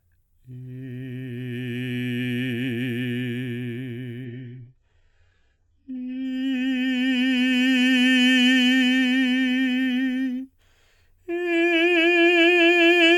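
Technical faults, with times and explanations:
4.25–6.25 s, adaptive stream at a lower bitrate: for two seconds the music abruptly loses its top end, with nothing above about 8.9 kHz, and turns thin and smeared, with swirly, synthetic-sounding highs and grainy codec artefacts, then snaps back to full quality with no gap. The player switched to a lower-quality rendition mid-stream, likely because the connection slowed, and the sound points to a drop from a mid-rate AAC encode to a very low-bitrate HE-AAC one.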